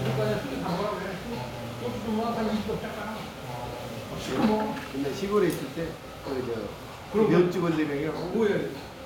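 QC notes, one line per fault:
Nothing stood out on listening to the audio.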